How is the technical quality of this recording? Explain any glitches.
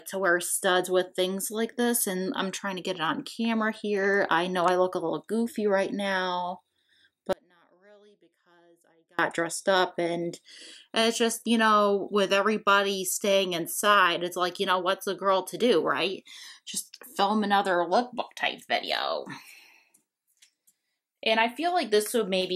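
One glitch stands out. Audio dropout to a faint residue from 7.33 to 9.19 s: the signal likely broke for about 1.86 s while the path stayed live, so the sound cuts abruptly to a faint leak roughly 35 dB down, then snaps back.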